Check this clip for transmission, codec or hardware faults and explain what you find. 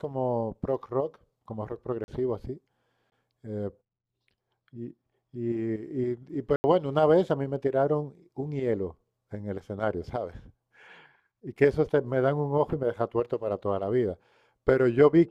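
Three blocks of digital silence interrupt the speech, at 2.04–2.08 s (40 ms), 3.10–3.12 s (20 ms) and 6.56–6.64 s (80 ms). Each time the playback chain likely failed to deliver samples, and zeros were written instead. The speech cuts off and back abruptly: short holes at the first two, a brief audible hole at 6.56 s.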